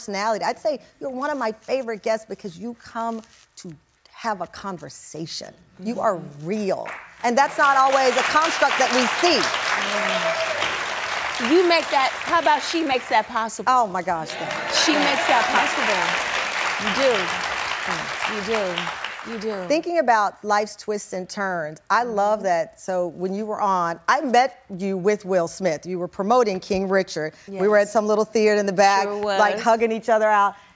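No technical faults are audible anywhere in the recording.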